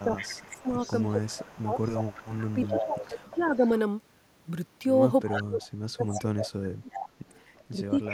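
From 0.0 to 3.47 s an echo leak returns a delayed copy of the speech about 357 ms late and about 15 dB down, likely from a loudspeaker echo canceller leaving residue. Overlapping it, from 0.04 to 3.66 s, speech suppressed in double talk pulls the talker down by as much as about 25 dB in places, likely because the canceller attenuated everything while both sides spoke. The same suppression returns from 5.27 to 7.18 s with drops near 35 dB, alongside brief echo scraps at 5.32 to 5.43 s (about 10 dB down) and 6.09 to 6.19 s. A longer echo runs from 6.91 to 8.09 s, and a milder dip of about 10 dB affects 7.71 to 8.14 s.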